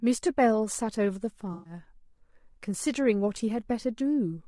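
Throughout the speech, the sound is rough and grainy, which points to low-delay AAC compression, likely AAC-ELD at a low bitrate around 32 kbps. Too few bits are left to code the fine spectral detail around the voice harmonics, so noise fills the gaps between them and the upper band sounds thin and synthetic. On a spectrogram, the harmonic stripes look blurred, with a speckled noise floor between them and a patchy, weakened region at the top.

From about 1.53 to 1.73 s comes AAC frame loss with concealment. About 120 ms of coded audio went missing, consistent with roughly six lost frames, and the decoder covered the gap by reusing and reshaping the last good spectrum. It sounds like a brief smeared, noisy, phasey patch in place of clear speech. On a spectrogram, the harmonic detail dissolves into a smudged, static block. The waveform shows an envelope that no longer follows the surrounding speech rhythm until normal decoding resumes.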